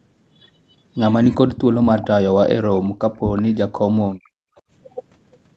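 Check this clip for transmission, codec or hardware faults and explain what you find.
You've got three echo-canceller problems stacked up in this speech, all of the sort you get when both ends of a call talk over each other through a loudspeaker.

Speech suppressed in double talk shows up at 1.37–2.09 s, 2.30–2.38 s, 3.92–4.11 s and 4.33–4.44 s. The voice dips or drops out in pieces, by roughly 25 dB in the first stretch and up to about 40 dB later. The likely cause is the canceller mistaking the talker for loudspeaker echo and turning everything down.

Echo leak appears at 1.96–2.02 s, 3.36–3.42 s and 4.56–4.61 s as short scraps of the voice coming back 377 ms late, roughly 20 to 35 dB below the speech. That's likely the far end's canceller missing part of what its microphone picked up off the speaker and sending it back.

Background gated by the echo canceller hits between 2.90 and 3.00 s. 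The room sound drops by about 37 dB for roughly 40 ms, then comes straight back. The canceller clamped the microphone hard while the loudspeaker was active and released it as soon as playback eased off.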